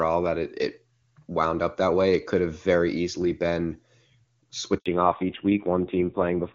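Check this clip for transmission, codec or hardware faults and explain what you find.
Two transmission faults occur near the end of the clip: a handover gap and a fallback to narrowband.

A handover gap runs from 4.78 to 4.86 s, about 80 ms of silence. The call was switched between networks, and no speech frames reached the receiver during the changeover. The speech falls away abruptly and stays silent until the new link picks up.

A fallback to narrowband begins at 4.86 s and lasts to the end. After the handover the call leaves the wideband HD Voice codec, which until then had sounded clean at what fits its top rate. It continues on an older narrowband codec, and nothing above 4 kHz survives. The sound turns duller and rougher, which points to one of the low narrowband rates.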